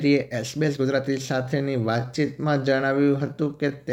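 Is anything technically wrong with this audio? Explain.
Yes. From 1.0 s to the end of the speech, there is a time-stretched section. The pace drops suddenly to about 0.7 times normal speed. The pitch stays where it was. This likely comes from software lengthening the audio to fill a set duration. It keeps the pitch by repeating short slices of sound. The result is that delivery drags.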